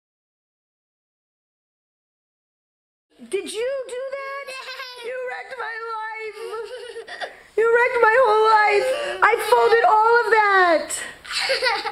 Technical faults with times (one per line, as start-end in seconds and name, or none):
3.20-3.88 zipper noise